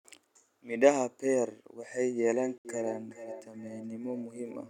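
From 1.96 s to the end, feedback echo between two devices appears. Each phrase returns about every 0.4 s, thinner and ringing, peaking about 13 dB below the speech.

At 2.58 to 2.65 s, the audio drops to silence for 69 ms, then resumes. This is likely a Bluetooth stall, with the headphone buffer running dry.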